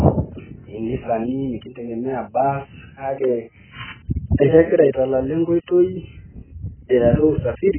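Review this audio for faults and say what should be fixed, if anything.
Heavy AAC compression at a very low bitrate is the likely cause of damage that runs through the whole clip. With so few bits to spend, the encoder discards the upper spectrum entirely and quantises what remains coarsely, so the speech has nothing above 3.1 kHz and sounds dull and muffled, with a smeared, warbling texture on sustained sounds and a fizzy edge on sibilants. The degree of loss fits an AAC-LC stream at around 9 kbps. Encoding at a substantially higher bitrate, or keeping an uncompressed or lossless master, would prevent this.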